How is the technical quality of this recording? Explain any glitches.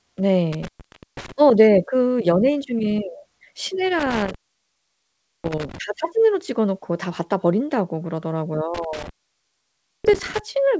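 The recording has three dropouts from an intermittent contact, heard over a call path whose audio stops at about 8 kHz, as a wideband call codec would produce.

Intermittent contact at 0.53 to 1.32 s, 3.99 to 5.78 s and 8.74 to 10.39 s: a loose cable or plug briefly breaks the signal, so the speech cuts out for about 0.5 s, 1.1 s and 0.95 s, with crackle at each edge and faint hiss in the gaps.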